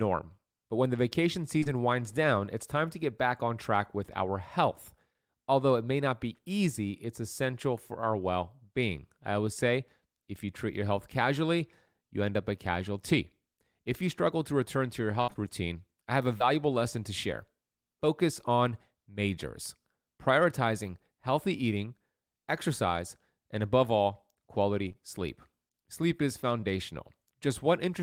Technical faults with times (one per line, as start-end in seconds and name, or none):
1.59-1.67 short concealed packet loss
15.21-16.42 repeated packet loss (robotic sound)
24.88-24.96 short concealed packet loss
26.60-26.64 short concealed packet loss